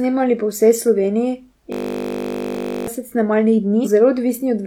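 Speech, with a system hang loop from 1.72 to 2.87 s. A single 20 ms slice of audio repeats exactly, well over a hundred times, producing a steady 50 Hz buzz. This fits the machine stalling while the sound hardware kept replaying one short ring buffer. Unlike a stutter or codec glitch, the tone is perfectly regular and unchanging. Damaged data in a compressed stream then causes a brief glitch from 3.81 to 3.87 s. The decoder misread corrupted frames and had to resynchronise. That gives one irregular blip rather than a sustained, periodic repetition.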